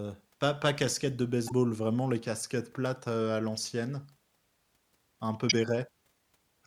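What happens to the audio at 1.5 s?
A brief glitch cuts in from 1.45 to 1.52 s, right after "pas pas casquettes de": damaged data in the compressed stream made the decoder misread frames and lose sync.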